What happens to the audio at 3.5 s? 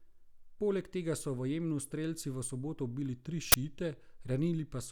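Right after "soboto ubili tri", from 3.52 to 3.54 s, an uninitialised buffer fault breaks in: one block was sent to the output before any audio had been written into it, so whatever stale memory it held was played as samples. The result is a loud, harsh burst of digital noise whose 20 ms length fits a single 20 ms block. A plain dropout would leave a silent gap, and a click would be a single sharp tick. This is instead a full block of loud, unrelated noise.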